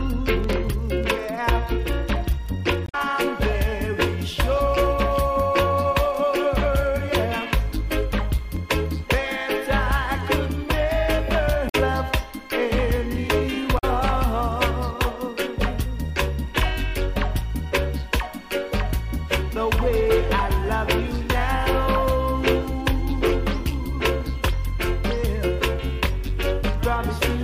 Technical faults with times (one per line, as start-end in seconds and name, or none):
2.84-2.95 damaged data in a compressed stream
11.66-11.75 damaged data in a compressed stream
13.75-13.84 damaged data in a compressed stream